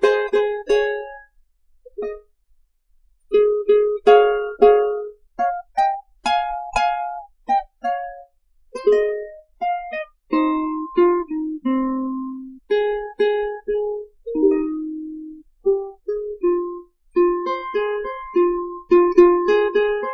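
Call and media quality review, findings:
Nothing to flag here; had a listen through and there's no fault worth a ticket.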